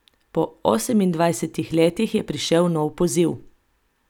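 Nothing in the speech recording points to a technical fault, and the signal holds steady with no audible breaks or disturbances at any point.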